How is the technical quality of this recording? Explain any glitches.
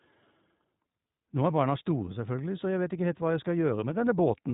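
The recording is narrowband and noticeably degraded by iLBC codec processing throughout. Across the whole clip, the speech sounds clear but rough and slightly synthetic. Each short frame's excitation is coded independently, and the frame rate fits 20 ms frames at the 15.2 kbps mode. A spectrogram would show everything above about 3.8 kHz removed, with a hard ceiling.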